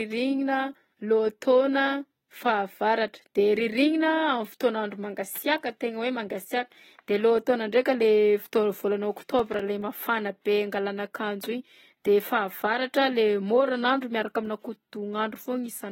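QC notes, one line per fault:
throughout: AAC compression, likely. Dull, smeared speech with warbly sibilants, consistent with low-bitrate coding near 24 kbps; spectrogram shows hard cut-off at 16.6 kHz and patchy high bands.
9.39–9.60 s: processor overload crackle. A few short silent gaps of about 3 ms, from missed buffers, make gritty tearing; the waveform shows hard-edged dropouts and the spectrogram shows vertical broadband streaks.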